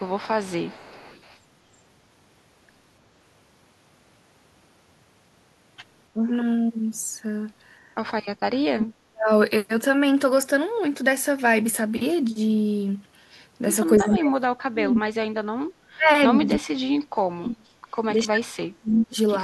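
Right from the start to 1.38 s there's an echo leak: a faint copy of the speech trailing 296 ms behind, around 30 dB down. The likely cause is a loudspeaker on the far end whose echo canceller didn't fully scrub what its mic picked back up.

Then the speech suppressed in double talk shows up, likely because both sides were talking and the canceller ducked everything it couldn't sort out. At 6.14 to 6.26 s it's just a brief dip of around 10 dB. From 8.69 to 9.3 s the speech drops out almost completely, by around 40 dB.

At 13.98 to 15.53 s the speech is chopped down by roughly 35 dB. A louder echo scrap at the same 296 ms lag, about 20 dB below the speech, slips through between 13.99 and 14.16 s.

From 15.91 to 17.87 s the speech is pushed down by up to about 40 dB again. A short, fairly loud echo burst, only about 10 dB under the speech, pokes through at 16.54 to 16.59 s.

Finally, 18.13 to 19.17 s gets hollowed out by around 35 dB.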